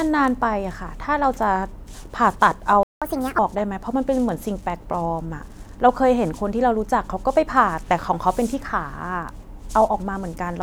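Speech, with a playback stall at 2.83 s. The sound cuts out in mid-flow and stays silent for about 0.18 s, until 3.02 s. The likely cause is the player running out of buffered data or its thread being blocked. It then resumes from where it stopped. A catch-up at higher speed follows, from 3.02 s to 3.39 s. The player rushes through its backlog at 1.5 times normal speed. Pitch rises by roughly seven semitones, giving a brief chipmunk quality. Speed and pitch then drop back to normal.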